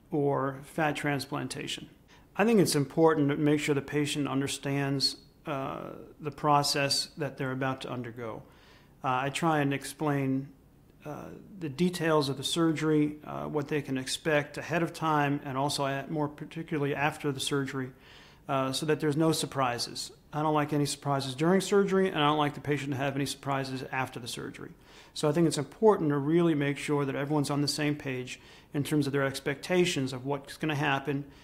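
Nothing in the audio stood out as a technical problem on listening.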